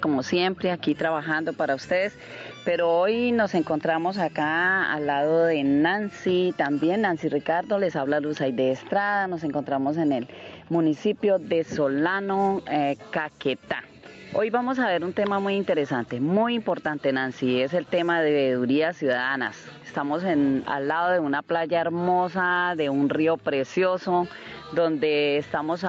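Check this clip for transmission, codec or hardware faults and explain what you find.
One fault runs through the whole clip: gain pumping, audible from start to finish. The likely cause is a microphone input gain set far too high, with a fast limiter or compressor clamping the level every time a loud sound arrives. The level swings by roughly 10 dB. Quiet and loud passages sit unnaturally close together and the sound comes across squashed. The audio is band-limited to 8 kHz, as expected from the call processing it passed through.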